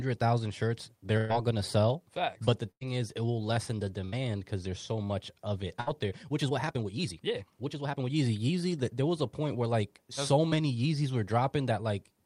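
Right after "thousand shirts", from 1.17 to 1.31 s, there's a burst of packet loss before "gonna sell". About 120 ms never arrived, so the receiver continued the last sound, turning it down, and jumped ahead. The same thing happens at 2.71–2.83 s (100 ms gone), at 4.05–4.14 s (80 ms), and at 5.80–5.88 s (60 ms) just after "so much of it".

From 6.06 to 8.04 s there's a time-stretched section. The pace jumps to about 1.53 times normal while the pitch holds steady, so it comes across rushed. That's likely software squeezing the section by dropping short slices.

At 10.48–10.52 s, after "a point where like", a short concealed packet loss shows up as a quick smear where about 20 ms was patched over and blended back in.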